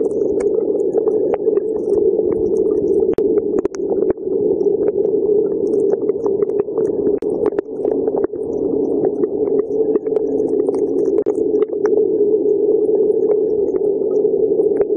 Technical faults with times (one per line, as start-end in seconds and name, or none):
3.14-3.18 gap at a join of encoded pieces
7.18-7.22 gap at a join of encoded pieces
11.22-11.26 gap at a join of encoded pieces